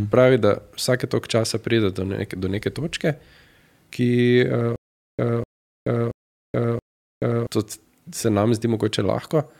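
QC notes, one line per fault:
4.76–7.47 s, stutter with silent gaps: a 248 ms fragment of the speech plays four times, each followed by 429 ms of digital silence. The same burst returns every 677 ms, and the speech meant for that span is lost. The likely cause is a stalled player or stream replaying its last buffer at each retry before running dry. On a waveform, identical blocks alternate with flat lines. A spectrogram shows matching patches separated by empty black columns.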